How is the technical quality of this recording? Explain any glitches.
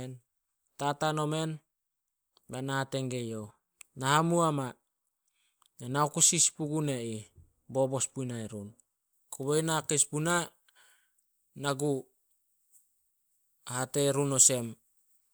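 There's one clear problem, and it starts partway through. From 9.13 s to the end of the clip, you've got pre-emphasis left on. The treble was boosted before recording, the way the CD 50/15 µs curve does it, and the matching de-emphasis never got applied afterwards. So everything up top sits about 8 dB hotter at 10 kHz than at 1 kHz. The speech turns thin, bright and sibilant from that point.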